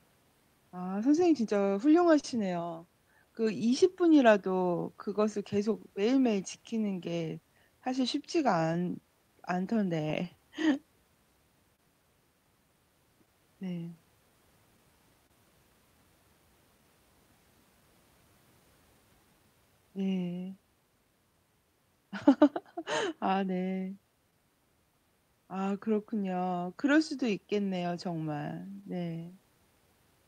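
Speech throughout, carrying clock drift between sender and receiver: the sender's clock runs roughly 2 percent slow, so the receiver's jitter buffer keeps draining and the playback never quite holds a steady pace. On a waveform this appears as speech whose timing slowly slips rather than any single visible defect. The drift drives repeated timing corrections from 0.24 to 29.88 s, where the receiver repeats short slices to stay in step. The net speed is about 99 percent, and the repeats add roughly 300 ms in total, heard as an unevenly lagging tempo with faint hiccups. A spectrogram shows these as tiny duplicated column patterns at irregular spacing. Scattered short gaps also occur: about three between 1.20 and 2.25 s, the longest around 40 ms; about fifteen between 4.72 and 16.80 s; and about four between 26.31 and 29.34 s, each near 10 ms. These come from late or lost packets patched by extending the previous sound, and they show as brief smeared, flattened harmonic streaks or small waveform discontinuities, heard as ticks.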